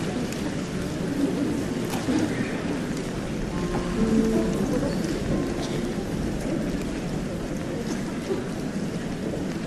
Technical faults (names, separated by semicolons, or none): train of clicks